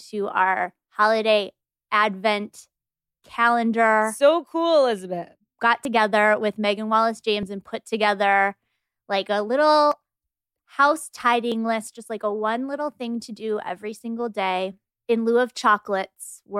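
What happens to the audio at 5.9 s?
At 5.85 s the speech jumps forward, with no gap of silence, as roughly a twentieth of a second of sound goes missing. This is likely a dropped buffer (overrun): the samples were overwritten before being read, so the audio on either side is spliced together.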